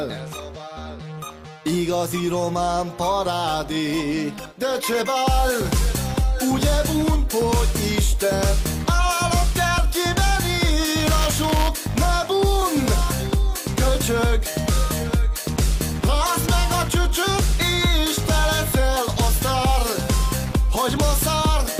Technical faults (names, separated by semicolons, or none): buffer tearing